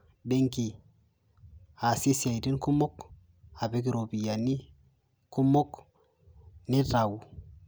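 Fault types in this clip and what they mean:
No faults can be heard anywhere in this speech recording. Nothing in the sound breaks, drops out or shifts in a way that points to a problem in how it was captured or carried.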